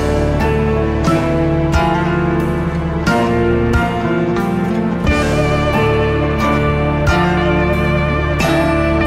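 There are no technical faults to describe at any point in the audio.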